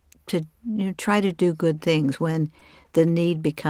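Speech, with one short concealed packet loss at 2.59 to 2.63 s. For a few hundredths of a second, audio that never arrived in time was replaced: the receiver extended the preceding sound, pitch-based if voiced and shaped noise if not, then crossfaded back into real audio. The patch is heard as a brief smear or wobble, and the repair fits roughly 20 ms missing, about 16 ms of it synthesised.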